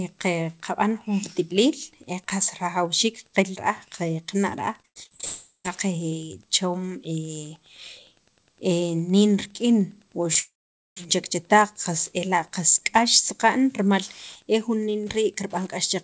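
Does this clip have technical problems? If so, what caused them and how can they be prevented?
Yes. The speech has three kinds of network fault, heard through a G.722 call path at 64 kbps that leaves nothing above 8 kHz.

Repeated packet loss (robotic sound) runs from 4.82 to 5.25 s. Seven gaps, the longest about 0.1 s, were each patched by stretching the preceding sound, so about half of that span is synthetic. It sounds choppy. On a spectrogram, smeared, over-regular harmonic bands alternate with real speech, and the waveform shows repeated near-identical cycles. Prevent it by fixing the unstable link, using wired or less congested networks, or enabling FEC or redundancy.

Two long network dropouts follow. From 5.25 to 5.66 s, about 0.4 s of audio is missing: a continued buzz fades over the first part and the last roughly 0.12 s is silent. From 10.39 to 11.08 s, about 0.58 s is lost, with only a brief fading tail before roughly 0.47 s of silence. 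The likely cause is packets that stopped arriving entirely, leaving a decaying smear and then a flat, empty band on the spectrogram and a flat line in the waveform. Prevent this with a more reliable connection and a jitter buffer or retransmission that can ride out bursts.

A short concealed packet loss at 10.33 to 10.37 s lost about 20 ms, about 14 ms of it replaced with extrapolated sound, just before the second dropout. It is a brief smear or wobble, seen as a slightly blurred vertical slice on the spectrogram and a small discontinuity in the waveform. Prevent it with in-band FEC and a slightly deeper jitter buffer.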